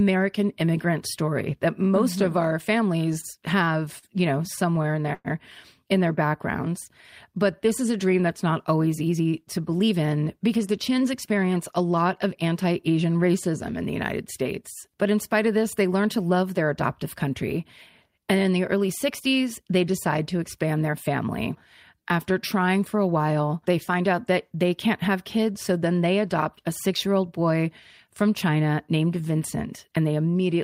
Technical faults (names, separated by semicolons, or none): short stall from a late packet; repeated stalls (stutter); jitter buffer speed-up